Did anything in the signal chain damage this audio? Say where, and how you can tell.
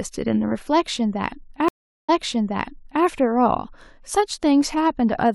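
Yes, a network stream reconnect, 1.68 to 3.04 s: the waveform flatlines for 401 ms, then speech resumes 0.95 s earlier from a fresh decoder.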